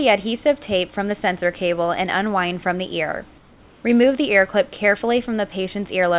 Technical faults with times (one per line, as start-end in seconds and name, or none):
3.38-3.84 comfort noise in place of the background